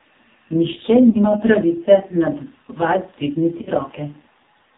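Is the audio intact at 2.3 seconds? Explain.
No. At 2.3 seconds, as across the whole clip, the speech sounds buzzy, thin and synthetic, with nothing above 4 kHz and a telephone-like dullness. This is heavy AMR narrowband mobile codec damage: the audio is squeezed into an 8 kHz-sampled band and rebuilt from a vocal-tract model driven by a few pulses every 5 ms. So little detail survives that it points to a very low bitrate, around 6 kbps.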